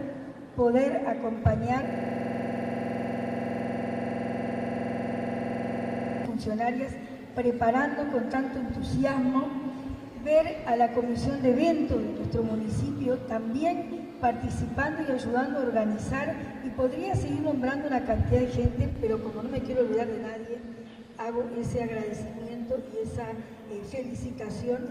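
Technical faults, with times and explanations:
1.88–6.25 s, system hang loop: the sound freezes into a rapid, rattling buzz at about 21.5 Hz. A single 46.44 ms fragment repeats identically about ninety times, which fits a 2048-sample buffer. The computer or its audio driver stalled, but the sound hardware kept reading the same ring buffer over and over. With a segment this short, the exact repeats merge into a steady mechanical drone pitched at the loop rate.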